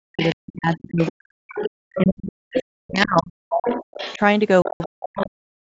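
Across the whole recording the talker's speech keeps dipping, thinning and breaking off, for roughly four seconds in total, at its deepest falling by around 40 dB. This is likely speech suppressed in double talk: with both sides speaking, the echo canceller turned the talker down along with the echo.

From 0.21 to 1.99 s, 2.54 to 3.07 s and 3.66 to 5.3 s a second, fainter voice sits underneath, about 15 dB below the talker at first, then about 10 dB. That is likely the other side's voice leaking through, the loudspeaker's output reaching the microphone.

Between 4.62 and 4.86 s a brief jumbled stretch interrupts the flow. These are chunks out of order: a 60 ms chunk landed three chunks late and plays after audio that should follow it. The call's microphone processing caps the band at 8 kHz, as expected.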